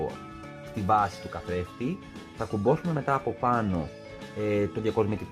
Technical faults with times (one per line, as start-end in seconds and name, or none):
none